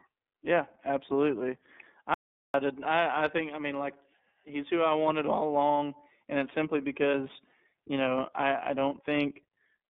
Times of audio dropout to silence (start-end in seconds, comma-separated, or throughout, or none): 2.14-2.54